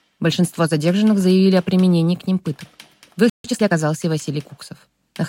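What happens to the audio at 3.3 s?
The sound cuts to silence from 3.30 to 3.44 s, a break of about 0.15 s, then resumes: a playback stall, likely the player running short of data.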